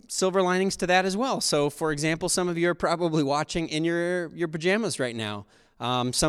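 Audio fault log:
Nothing stood out on listening to this speech recording.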